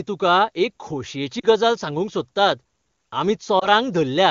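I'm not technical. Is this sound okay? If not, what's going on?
No, not quite. There are lost AMR speech frames at about 1.39 to 1.46 s and 3.59 to 3.67 s, where the speech briefly dips and warbles. Bits got corrupted in transmission, so the decoder papered over each gap by stretching the last good sound.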